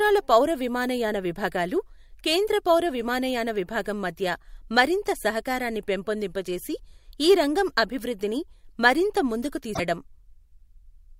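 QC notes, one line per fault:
9.71–9.80 s, damaged data in a compressed stream: right after "రంగం అభివృద్ధిని మరింత ముందుకు", about 0.1 s of the speech is disrupted by a brief glitch. Some bytes in the compressed stream are corrupt there, so the decoder misreads or rejects those frames and rebuilds garbage instead of the real signal. It loses sync until it finds the next valid frame header, which is why the damage is brief and sharply bounded.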